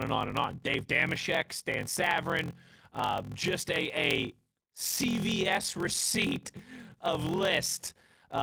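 A block size mismatch (padded) runs through the whole speech clip. One stage writes shorter blocks than the next reads, which fits a 1024-sample read size. Zeros fill each gap. This gives a 43.1 Hz buzz and slows the speech to 0.861 times its normal speed, at roughly unchanged pitch, over light Opus voice compression.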